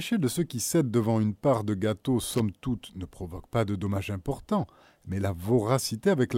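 It's a speech clip with one fault: a short burst of loose connector crackle from about 2.30 to 2.40 s, right after "une part de gâteau" and before "toute ne provoque pas". For roughly a tenth of a second, a worn or dirty contact keeps making and breaking, chopping the signal into irregular scratchy crackle.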